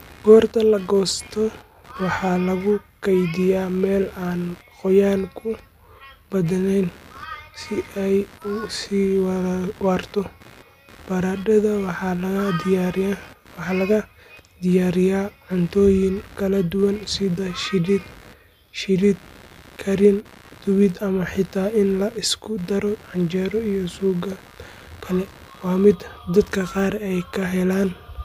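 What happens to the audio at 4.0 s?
At 4.0 s, as throughout the speech, computer activity noise runs underneath: a buzzy chirping at roughly 70 pulses a second, about 25 dB below the voice, as processor load shifts the audio ground. A spectrogram shows evenly spaced vertical striations ignoring the speech; the waveform shows small regular spikes in pauses.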